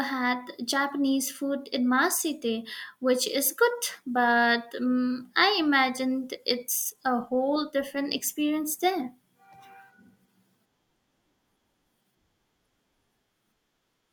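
Speech with no audible technical faults.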